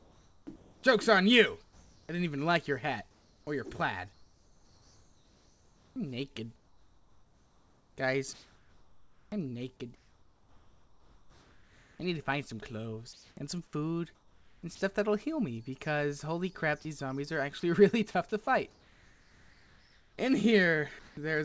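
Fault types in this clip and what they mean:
Sound chopped by the voice detector: through 0–14.8 s and 17.6–21.2 s, sound keeps switching to steady synthetic hiss, likely voice-detector gating with comfort noise, unlike glitchy packet-loss gaps.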